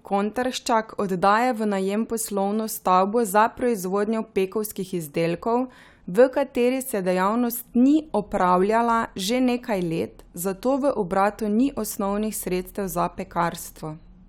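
Speech recording with no audible technical faults anywhere.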